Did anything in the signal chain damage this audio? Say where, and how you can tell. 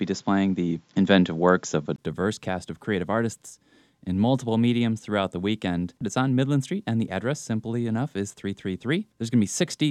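Yes. The opening 1.98 seconds of this speech come through a poorer input than the rest. The damage sits at the capture stage, where the input device changed. Nothing above 7.4 kHz is present there, so the start sounds dull and boxy. At 1.98 s there is a silence of about 20 ms, then the full band returns with "cast of creative artists". The level also shifts by about 5 decibels. The faint noise floor changes too. This is likely an input switched to a poorer device.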